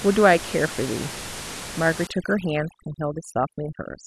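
From 2.07 s to the end, overdone noise removal pulls single frequency bands down wherever they sit near the noise estimate. The room noise, about 13 dB under the speech, drops and breaks up into twinkling specks. A gate would instead cut everything at once.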